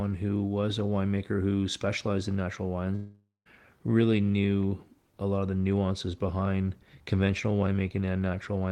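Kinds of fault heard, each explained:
Long network dropout: after "who specialized in natural", audio stops arriving from 2.95 to 3.47 s, likely lost packets; a fading buzz fills in, then about 170 ms of silence before "really knew a lot". Spectrogram: smeared band fading to an empty column. Waveform: decay to a flat line.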